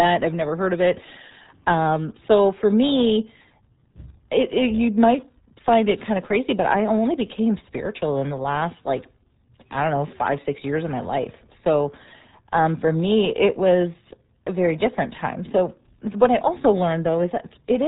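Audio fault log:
Throughout: RealAudio 14.4 codec. The speech is heavily muffled and gargly, with nothing above 3.8 kHz. The coarse, warbling texture fits a dial-up codec at about 8 kbit/s. On a spectrogram, energy stops flat at 3.8 kHz, with smeared, blotchy harmonics below.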